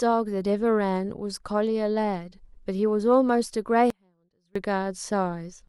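At 3.90 s the speech cuts out abruptly, and it returns at 4.56 s. This is an audio dropout to a faint residue, lasting about 0.65 s. Only faint sound remains, roughly 35 dB below the speech. The likely cause is a brief loss of the signal while the path stayed live.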